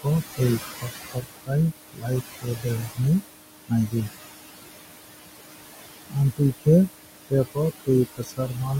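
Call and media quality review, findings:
Noise suppressor artifacts, whole clip: suppressor pulling about 19 dB from bands it judges steady noise, frame by frame. The room noise, about 9 dB under speech, drops out between phrases and swells back under them.

Speech cut by the noise suppressor, at 0.73–0.90 s, 1.06–1.52 s, 1.93–2.08 s, 2.33–2.66 s, 2.82–3.00 s and 8.13–8.56 s (after "khe tap o"): suppressor misreading low-level speech as noise and attenuating it by about 16 to 21 dB, for a tenth to a third of a second each time. Soft consonants and word endings sound swallowed or faint.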